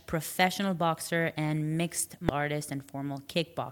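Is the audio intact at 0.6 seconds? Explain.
Yes, at 0.6 seconds the speech plays through intact, with no dropout, click, distortion or other fault at that moment.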